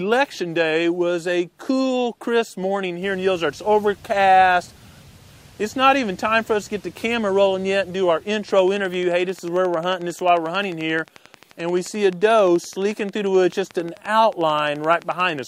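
A steady train of clicks ticks through the sound from 8.59 s to 15.40 s, about 11.3 per second and roughly as loud as the audio itself, likely interference or a faulty connection or power supply.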